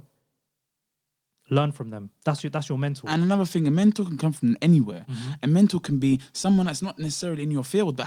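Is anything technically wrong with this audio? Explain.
Yes. From 2.9 to 3.97 s, between "your that's your" and "can come from anywhere", the speech turns rougher and grainier for about a second before its clarity returns. This is a call bitrate drop: the call's bandwidth estimate fell, so the encoder was told to spend far fewer bits. The sound fits a fall from about 32 kbps to roughly 17 kbps, which forces coarser coding of the voice until the rate recovers.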